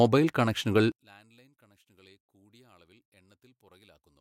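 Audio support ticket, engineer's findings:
Mono sum collapses from 0.92 s onward, down about 34 dB, centred speech nearly gone. Likely one channel inverted; reversed polarity cancels content common to both channels.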